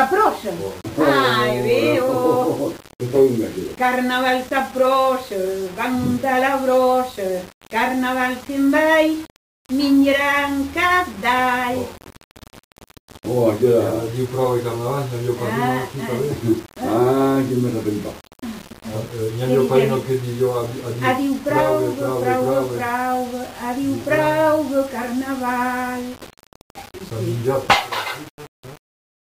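Throughout, the signal was likely cut to 6 bits and rounded without dither, a case of low bit depth without dither. The rounding error follows the sound, so grainy distortion sits only about 20 dB below it, and quiet passages turn gritty.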